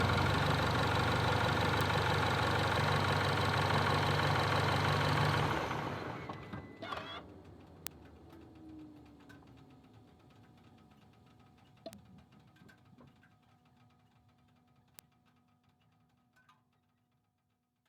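Four sharp, isolated ticks cut through the sound at 1.81, 7.87, 11.93 and 14.99 s, peaking at about -14, -8, -26 and -20 dBFS. The one at 7.87 s is the loudest, and the one at 11.93 s is faint. Each is a bit error spike: a single flipped bit throws one sample, or two adjacent samples at 11.93 s, off by a power of two before the signal snaps back. That produces a broadband click unrelated to the surrounding material.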